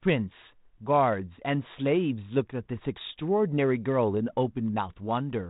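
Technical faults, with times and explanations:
Nothing here counts as a technical fault; the speech simply comes through G.726 telephone coding at 32 kbit/s, which keeps everything under 4 kHz as that path normally does.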